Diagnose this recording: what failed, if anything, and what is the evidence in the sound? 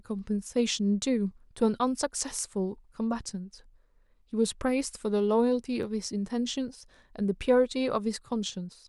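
Analogue wiring stage. A single faint snap sits on top of the speech at 5.83 s. An electrical switching spike, likely a nearby switch arcing into the line.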